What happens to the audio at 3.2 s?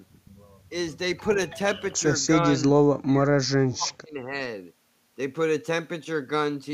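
The echo canceller most likely hit double talk between 3.01 and 3.34 s, mistook the speech for loudspeaker echo, and pulled it down. The result is speech suppressed in double talk: the speech dips by around 25 dB in patches adding up to roughly a fifth of a second.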